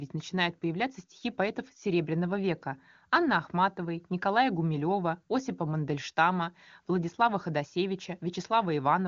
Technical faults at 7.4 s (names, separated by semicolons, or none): none